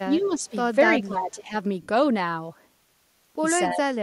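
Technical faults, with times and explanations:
0.08–0.52 s, speech suppressed in double talk: the speech dips by about 5 dB over roughly a third of a second. That's most likely the echo canceller hearing both ends talking at once, failing to separate the near talker from the loudspeaker echo, and pulling everything down.
0.21–0.3 s, echo leak: a faint delayed copy of the speech sneaks in about 263 ms behind the original, at about 25 dB under it. Likely the far end's on a loudspeaker and its echo canceller didn't fully scrub what its mic caught, so a scrap got sent back.
1.03–1.54 s, speech suppressed in double talk: the deepest of the dips, about 15 dB down across about half a second, so the speech sounds pushed back and thinned. The likely cause is again the canceller clamping both sides while they overlap.
1.82–1.88 s, lost LE Audio frames: a 60 ms gap, which fits about six 10 ms frames going missing over Bluetooth LE Audio. 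The LC3 decoder repeats the last spectrum with scrambled signs and fades it, so the speech briefly turns into a noisy, smeared hiss.
3.73–3.85 s, speech suppressed in double talk: a short, roughly 100 ms duck of about 10 dB, most likely the same echo canceller reacting to overlapping talk and turning the speech down along with the echo it was chasing.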